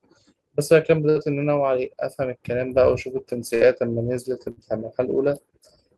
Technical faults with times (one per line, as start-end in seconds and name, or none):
1.09-1.18 burst of packet loss
3.55-3.64 burst of packet loss
4.51-4.60 burst of packet loss